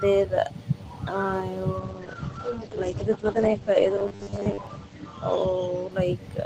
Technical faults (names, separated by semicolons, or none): call bitrate drop; robotic sound from repeated short buffers